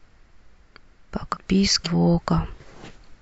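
The decoder dropped whole compressed frames, about fifteen at 1.33 s and about three at 1.84 s. The speech lurches forward roughly 0.7 s, then 0.15 s.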